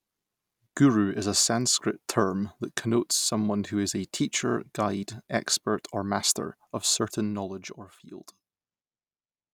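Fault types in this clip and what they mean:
Nothing stood out on listening to this speech.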